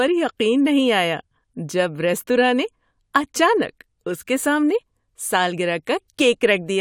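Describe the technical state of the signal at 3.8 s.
At 3.8 s the speech signal is intact, with no audible fault at that moment.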